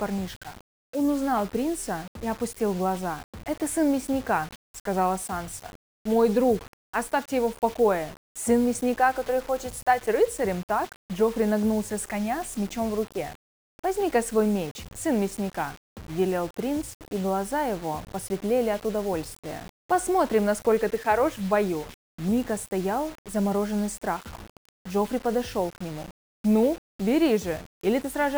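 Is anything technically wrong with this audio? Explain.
Yes. The whole clip appears to have passed through a stage that likely cut it to a low bit depth without dither: the level steps fit about 6 bits, with each sample rounded to the nearest step. Because no dither was added, the rounding error follows the signal rather than being random, so it turns into distortion instead of neutral noise. It sits around 20 dB below the signal and makes quiet sounds grainy and gritty, turning into a near-steady hiss where the audio is dense or noisy.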